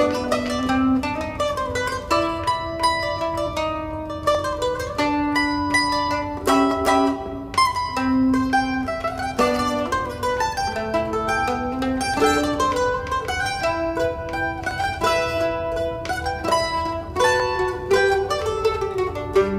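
The stream has likely lost a tiny run of samples, a fraction of a millisecond each time, so the waveform jumps straight to a later value. These dropped samples are heard as single sharp clicks at 4.35, 6.71, 14.71 and 17.40 seconds, with no sound audibly missing.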